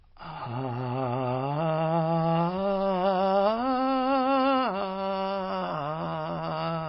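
Throughout the music, heavy MP3 compression is the likely cause: starved of bits, the encoder discards everything above 5.5 kHz and lets weak frequency lines flicker between frames, a plainly audible damage that fits a very low bitrate near 24 kbps, leaving a dull, watery, swirling sound.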